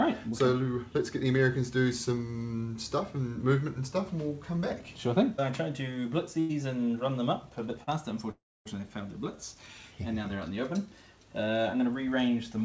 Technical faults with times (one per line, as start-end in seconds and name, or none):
6.40-6.51 short stall from a late packet
7.83-7.89 short stall from a late packet
8.31-8.67 call audio freeze